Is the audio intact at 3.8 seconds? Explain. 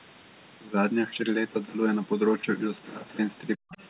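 No. Around 3.8 s the speech is undermined by two closely linked problems, both most likely from an echo canceller struggling with double talk.

The first is speech suppressed in double talk, from 3.56 to 3.76 s. The canceller could not tell the talker apart from loudspeaker echo and pulled the whole signal down, by roughly 40 dB at its deepest, over about 150 ms in total. It sounds like the voice dipping or partly dropping out just before 3.8 s. On a waveform the envelope collapses into a narrow trough. On a spectrogram the speech energy thins to near-blank patches.

The second is the other side's voice leaking through, from 3.74 to 3.83 s, which covers 3.8 s itself. The far-end voice was not fully cancelled from the microphone, so a faint second voice remains, about 30 dB below the speech. It is heard as a brief scrap of a second voice. On a spectrogram it appears as weak harmonic traces that do not line up with the main voice. 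It is barely visible on a waveform.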